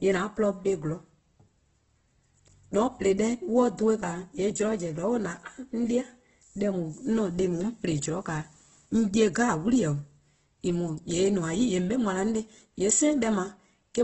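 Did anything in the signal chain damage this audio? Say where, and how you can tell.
Yes, at the codec: likely heavy Opus compression throughout. Nothing sounds above 8.1 kHz, and noise-filled bands leave the speech rough and grainy, consistent with about 12 kbps.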